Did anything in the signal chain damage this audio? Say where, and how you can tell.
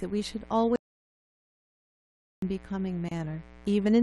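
Yes. Damage shows up at three stages.

Mains buzz sits under the whole clip. It is a steady, raspy 60 Hz buzz, with harmonics climbing well into the kHz range. It sits roughly 25 dB below the speech. This is an analogue wiring problem. Sharp switching spikes from a dimmer, a rectifier or an unshielded run get into the line twice per mains cycle. That spiky shape is what makes the buzz rasp rather than hum.

There is an audio dropout to silence from 0.76 s to 2.42 s. The speech stops mid-flow and returns about 1.66 s later. The gap is silent. No room tone remains, and nothing spoken in that span survives. The cause is likely at the input stage. The device or its link was lost, and the recorder kept writing silence until the signal returned.

A gap at a join of encoded pieces opens from 3.09 s to 3.11 s. It is a 28 ms hole in otherwise continuous speech. The codec smears its edges, and the speech resumes exactly where it left off. 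That points to the codec stage. Pieces were encoded separately and joined without trimming. The encoder's start-up delay and last-frame padding stayed in, leaving a short silence at the seam.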